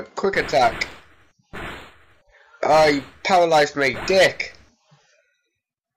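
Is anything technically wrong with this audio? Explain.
No, no technical faults audible.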